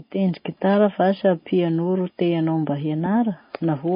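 Transcoding between lossy codecs runs throughout: nothing remains above 5 kHz, and watery smearing sits under a second layer of coding grain. This likely comes from a low-rate MP3, near 24 kbit/s, re-encoded as WMA near 64 kbit/s, which keeps the earlier cut-off.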